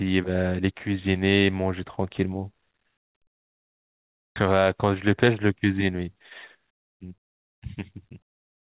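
At 4.36 s the speech jumps forward abruptly in a skip ahead. Roughly a second of audio is missing, and nothing fills the gap: the material on either side is spliced almost directly together. The receiver discarded that stretch while later audio was already queued, possibly when the jitter buffer overflowed, so the playback delay dropped by about the same amount and the speech simply lurches ahead.

From 5.94 to 6.16 s a jitter buffer speed-up sets in. Playback runs at about 113 % with pitch unchanged as the receiver repeatedly cuts out short pitch-period-length pieces, removing around 40 ms in total. A longer, stronger run follows from 6.65 to 8.67 s at about 118 %, taking out roughly 400 ms. Here the speech sounds noticeably hurried as the buffer drains its excess delay. Throughout, the audio is band-limited with nothing above 4 kHz, which fits a narrowband G.711 call codec.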